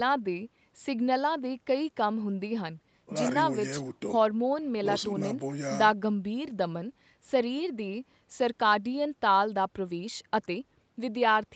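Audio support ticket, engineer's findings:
Nothing stood out on listening to the speech: the call processing and Opus call path sound as expected, with content topping out around 8 kHz.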